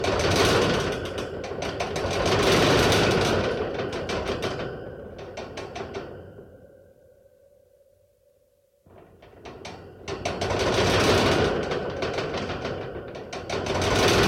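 No technical faults can be heard anywhere in this recording of sounds; the signal stays intact and continuous throughout.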